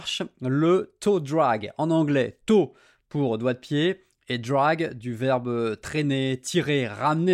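Nothing in the recording stood out as a technical fault on listening.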